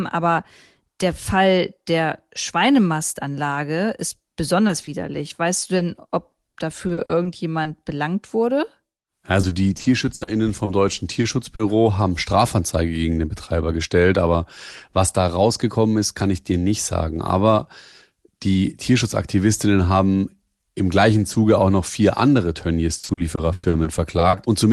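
Short concealed packet loss hits at 4.67–4.71 s and again across 4.81–4.89 s. Brief stretches of speech arrived too late, and the decoder extended the preceding sound to fill them. Each is a quick smear or wobble, seen on a spectrogram as smoothed, repeated harmonics.

Repeated packet loss (robotic sound) follows from 5.77 to 7.67 s, ending just before "belangt wurde": nine gaps totalling 220 ms, the longest 40 ms. From 9.41 to 11.61 s there are nine gaps totalling 260 ms, the longest 60 ms. The worst is from 22.99 to 24.35 s, after "auch noch vier andere": nine gaps, 360 ms in all, the longest 100 ms, about a quarter of the span patched. Each run sounds choppy, with pieces missing. On the waveform, the envelope breaks into chunks. On the spectrogram, the harmonic bands smear flat beneath the roughly 12 kHz ceiling of the Opus call path.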